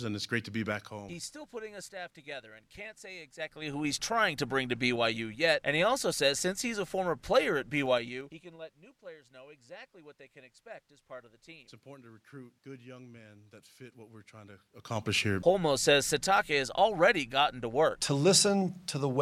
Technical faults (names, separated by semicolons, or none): zipper noise